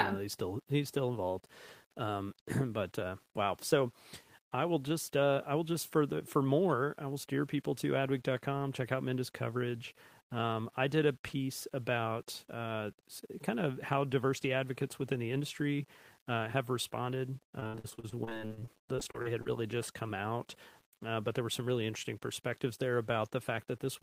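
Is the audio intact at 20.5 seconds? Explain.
No, at 20.5 seconds the speech carries the same grainy grit it has from start to finish. That's low bit depth without dither, likely a rounding down to about 9 bits, so the error tracks the signal and quiet passages turn rough, with noise only roughly 35 dB under the speech.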